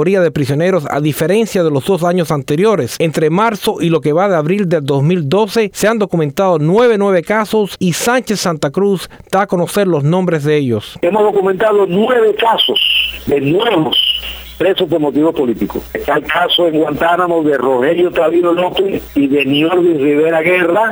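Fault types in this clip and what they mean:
No faults can be heard anywhere in this recording.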